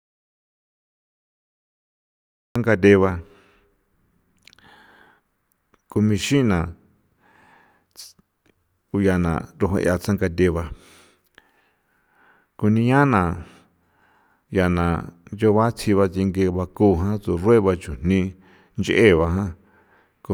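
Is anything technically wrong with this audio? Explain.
Yes. The speech clip opens with an audio dropout to silence that runs from 0.0 to 2.56 s. The likely cause is a lost input with the recorder still writing zeros. Unlike a natural pause, the gap holds no room tone at all, and speech arrives abruptly mid-flow.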